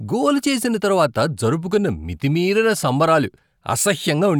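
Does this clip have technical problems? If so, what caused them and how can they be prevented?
No, there's no audible technical fault anywhere in this speech clip, so nothing needs preventing.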